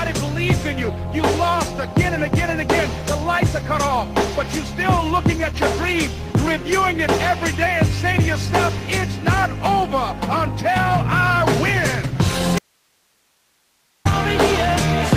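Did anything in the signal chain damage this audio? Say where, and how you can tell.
Yes. Around 12.59 s the wanted signal was lost upstream while everything after the break stayed live, likely an intermittent connection in the analogue wiring or at the interface input. The result is an audio dropout to a faint residue: the sound cuts off abruptly and for about 1.47 s only hiss remains, roughly 45 dB below the normal level, until it returns just as abruptly at 14.05 s. A pause or fade would not switch that sharply.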